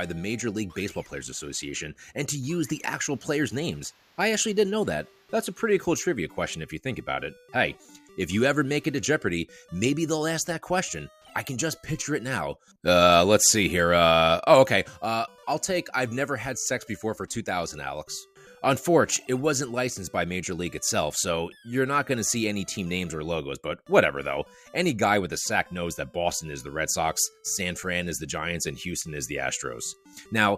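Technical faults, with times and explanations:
0.12–30.39 s, clock slip clicks: faint, evenly spaced ticks recur about every 0.4 s, some seventy in all, with one sample skipped or doubled at each. The likely cause is two free-running clocks differing by roughly 50 ppm, so a whole sample of error builds up at that steady rate. On a waveform each slip is a tiny one-sample step; a spectrogram shows thin vertical broadband lines at regular intervals, clearest where the sound is loud.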